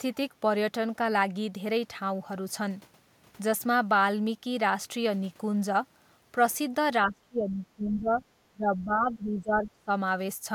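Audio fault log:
7.07–8.22 s and 8.53–9.89 s, speech suppressed in double talk: the speech dips by as much as about 25 dB, then about 20 dB, for most of each span, likely because an echo canceller could not separate the near-end talk from the overlapping far-end echo and attenuated both.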